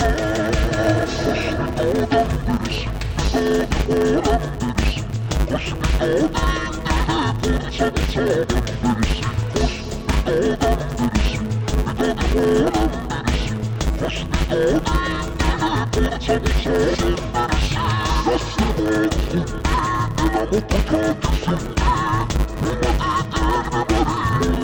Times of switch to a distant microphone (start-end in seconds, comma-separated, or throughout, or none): none